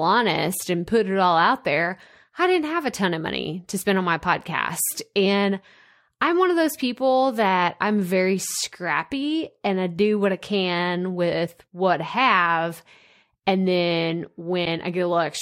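At 3.80 to 3.83 s, right after "ton of money to" and before "on my podcast", the speech jumps ahead with a brief glitch. The same thing happens at 11.46 to 11.49 s, between "do what I can" and "what I have", and again at 14.64 to 14.67 s. Each glitch lasts about one 26.1 ms frame. That's the signature of a broken MP3 bit reservoir, most likely from dropped frames leaving the next frame decoding borrowed bytes that belong to something else.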